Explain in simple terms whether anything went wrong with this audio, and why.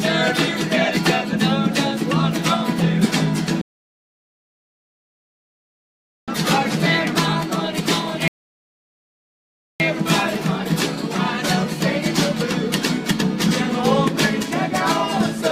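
Yes, something went wrong: the audio has two rebuffering stalls. The player ran out of downloaded audio and simply waited for more. The sound drops to silence at 3.61 s and picks up again at 6.28 s, a gap of about 2.7 seconds. It stops again from 8.28 s to 9.80 s, about 1.5 seconds. Each time it resumes exactly where it left off, so nothing is missing. The pauses just add dead air.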